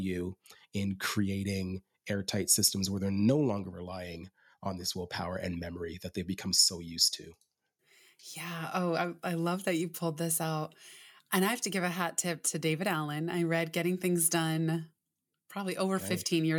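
Listening to the speech here, nothing stood out as a technical problem.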